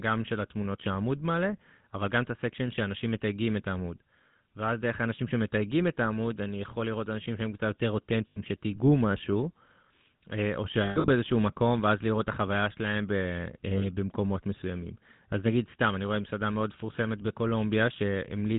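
Throughout, the speech has been coded with the GSM full-rate codec, whose character fits a 13 kbps mobile link. The vocal tract is modelled and driven by a thinned, regularly spaced pulse excitation, and everything above 4 kHz is lost. The result is a plainly audible buzzy, gravelly roughness.

Lost GSM frames follow at 8.28–8.39 s, 10.84–11.09 s and 13.78–13.85 s. Each gap is filled by repeating the last good frame. The first gap is 80 ms and the last 40 ms. The middle one is scattered, totalling 180 ms over 240 ms, with the longest run around a tenth of a second. Each gap sounds as a brief rough, metallic ring.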